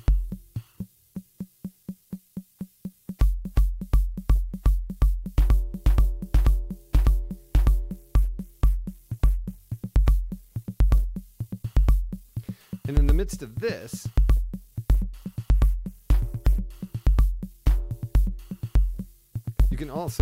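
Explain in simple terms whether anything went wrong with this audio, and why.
Twice, from 7.9 to 9.8 s and again from 14.9 to 17.1 s, the wireless link got crowded and the phone responded with a Bluetooth SBC bit pool drop, squeezing the sound into far less data to keep it playing without gaps. With so little room, the highest frequencies were dropped and the rest stored more roughly. The audio turns dull and muffled, with a gritty, sandy noise, until the connection recovers.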